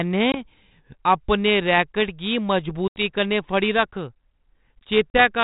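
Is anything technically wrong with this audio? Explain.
Yes. There is packet loss on an ADPCM call at 0.32–0.45 s, 2.88–3.03 s (between "रैकट गी" and "कन्नै फड़ी") and 5.1–5.2 s, with roughly one, four and two packets gone (20, 80 and 40 ms). Each loss is filled with silence, which shows as a hard-edged flat gap in the waveform and a blank vertical band on a spectrogram. The G.726 decoder's predictor and step size drift out of step with the sender's, so the sound comes back with brief, slight distortion before settling.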